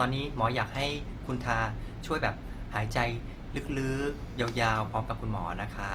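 Opus compression is heard throughout the speech, from start to finish. The sound is most likely from the music (CELT) mode of the codec at a low rate, which fits a bitrate around 24 kbps. The band still reaches about 20.1 kHz, but at this rate each band's energy is kept while its detail is filled in by folded or noise content. That gives the speech a plainly audible grainy, rough, noisy texture rather than swirling holes.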